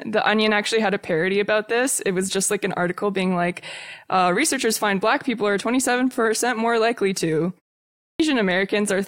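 At 7.97 s, after "more likely to" and a 0.45 s pause, a clipped start after a pause swallows about 226 ms as the output wakes, so sound resumes abruptly.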